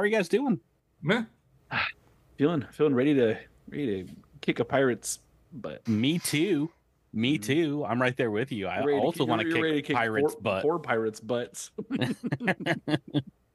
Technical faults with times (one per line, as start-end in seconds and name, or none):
none